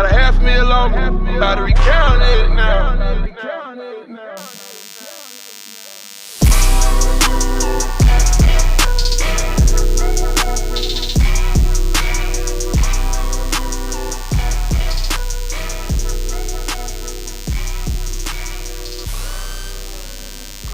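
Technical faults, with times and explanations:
4.37 to 20.74 s, DECT cordless phone buzz: a thin, rasping buzz appears and persists to the end, roughly 20 dB under the sound. A nearby DECT handset or base pulses every 10 ms, and the audio circuit rectifies each burst into a 100 Hz tone rich in harmonics. Mains hum, by contrast, is smoother and sits at 50 or 60 Hz.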